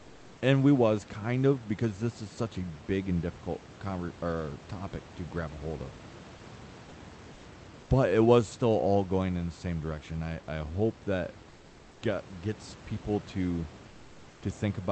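At 0.00–0.41 s, before "and we was kind", at 11.49–12.01 s, between "I I hope that" and "get gets people to", and at 13.87–14.41 s, after "get gets people to", the room background turns into a smooth, featureless hiss about 2–3 dB quieter. This is comfort noise in place of the background, likely from the Opus encoder's discontinuous transmission, which pauses sending during silence so the receiver substitutes synthetic noise.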